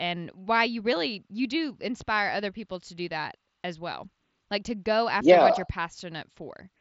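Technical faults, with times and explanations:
No technical faults can be heard in this speech.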